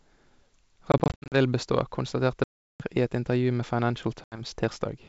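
Speech breaks into hard-edged holes of silence, with slightly distorted speech as it resumes, at three points. From 0.92 to 1.36 s, just before "vil bestå konstaterte", about 220 ms is lost in scattered gaps of up to 60 ms. From 2.44 to 2.81 s, right after "vil bestå konstaterte", about 360 ms is lost. From 4.24 to 4.41 s, 80 ms drops out. This is packet loss on an ADPCM call. Roughly ten, twenty and a handful of packets go missing in turn, and after each gap the decoder's predictor and step size no longer track the sender's until they settle. The G.722 wideband coding at 64 kbit/s carries the speech up to 7 kHz.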